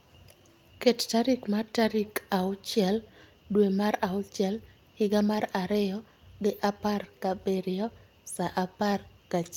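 Speech clip with one lost packet rebuilt from error correction at 7.03 s, between "mar ariyo gi apar" and "gabiriyo sa". There's no gap, just a brief rough, noisy patch of about 20 ms where the decoder played the low-bitrate backup copy.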